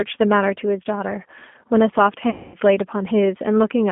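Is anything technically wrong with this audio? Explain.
Yes. The whole clip has passed through a low-bitrate G.729 codec. The encoder reduces the speech to a vocal tract filter, a pitch predictor and a few pulses per frame, which fits an 8 kbit/s stream. The result is a band of roughly 200 Hz to 3.5 kHz, with a plainly rough, synthetic quality.

From 2.30 to 2.57 s there is VoIP packet loss concealed by the speech codec. About 240 ms of audio never arrived, which fits a run of around a dozen packets. The decoder kept extrapolating from its last pitch and filter at falling gain, so that stretch becomes a stretched buzzy tone or coloured noise that fades rather than clean speech.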